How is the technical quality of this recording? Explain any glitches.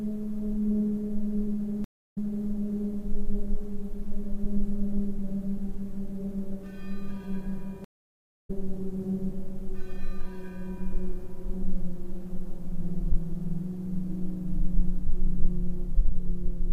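Two glitches, both stream reconnects. At 1.84 to 2.49 s the connection drops, leaving 254 ms of silence, then a fresh decoder picks up 392 ms earlier, so you hear a short stretch repeated. At 7.84 to 8.50 s there's 579 ms of silence, and playback resumes about 0.7 s later, skipping ahead.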